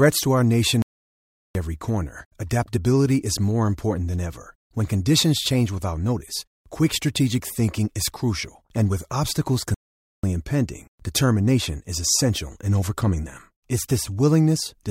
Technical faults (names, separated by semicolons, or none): playback stall